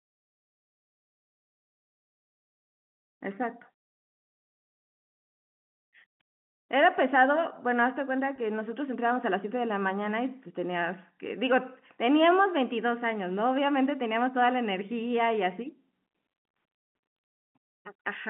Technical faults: packet loss with pitch repetition

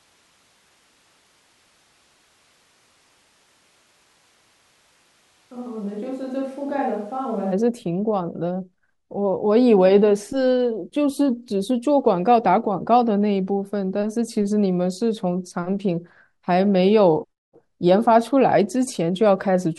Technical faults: switch to a distant microphone

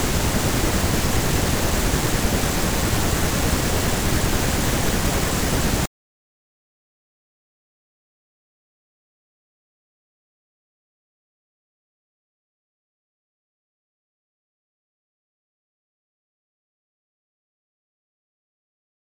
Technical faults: periodic USB or driver dropouts

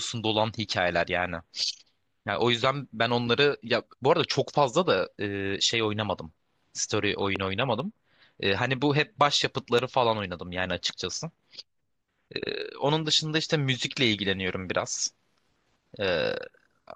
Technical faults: loud pop

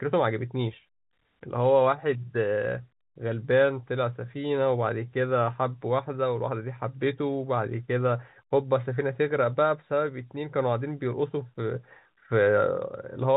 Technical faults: none

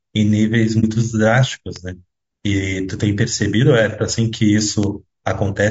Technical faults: low-delay AAC compression; AAC frame loss with muting; bit error spike

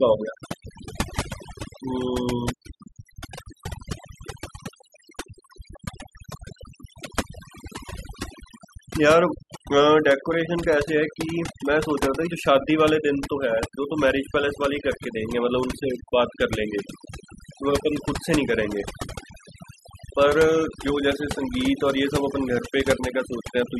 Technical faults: overdone noise removal

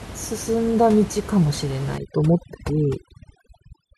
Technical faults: overdone noise removal

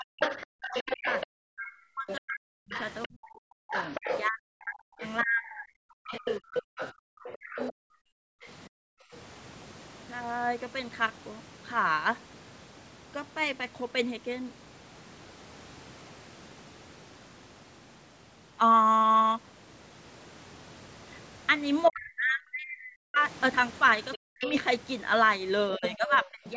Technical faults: speech suppressed in double talk; other side's voice leaking through; background gated by the echo canceller

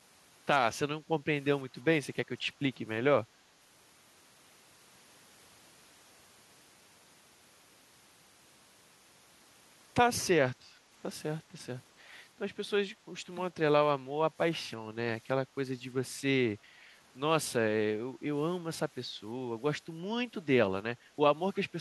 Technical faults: background gated by the echo canceller; echo leak

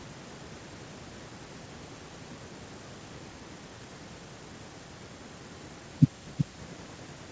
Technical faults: none

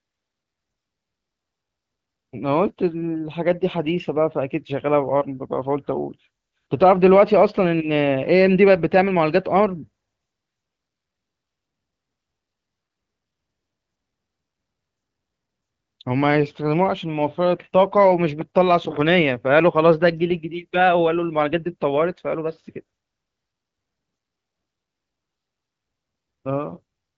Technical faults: none

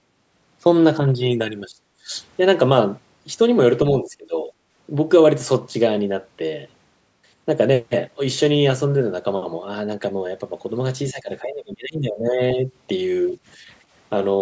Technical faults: speech suppressed in double talk; background gated by the echo canceller

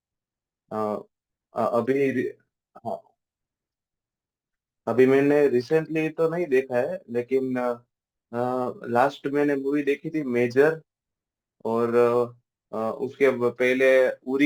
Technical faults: crude rate conversion

